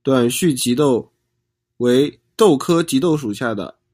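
From 0.30 s to 3.09 s the speech turns thin, bright and hissy, with sibilants cutting through sharply while the body of the sound falls back. This is pre-emphasis left on: the treble was boosted along the CD-style 50/15 µs curve, but the matching de-emphasis was never applied on playback. The highs therefore stay lifted by about 8 dB at 10 kHz relative to 1 kHz.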